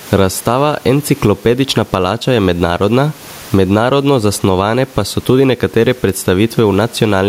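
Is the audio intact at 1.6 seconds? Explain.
No. Gain pumping runs through the whole clip: the gain swings by roughly 15 dB, pulling down on loud speech so loud and soft parts sit closer in level and the sound is squashed, likely from an over-driven input and fast limiter.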